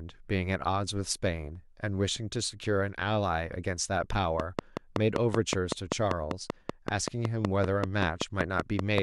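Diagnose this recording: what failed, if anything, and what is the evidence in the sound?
A steady train of clicks ticks over the speech from 4.40 s to 8.99 s, about 30 sharp, near-identical pops at a regular 5.23 per second, standing well above the voice. The likely cause is interference pulses coupling into the analogue wiring from nearby equipment.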